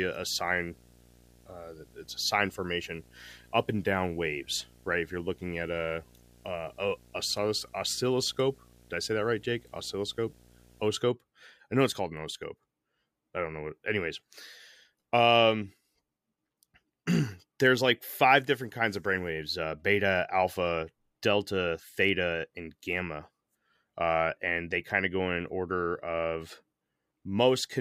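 From the start of the speech to 10.88 s there is video or display buzz: a screen or video cable is coupling its scan signals into the audio path. The result is a harsh buzz at the 59.94 Hz field rate with gritty hash above it, plus a very high whistle at the 15.7 kHz line rate, sitting roughly 25 dB below the speech. A spectrogram shows stacked horizontal harmonics of 59.94 Hz and a thin steady line at 15.7 kHz that stops at 10.88 s.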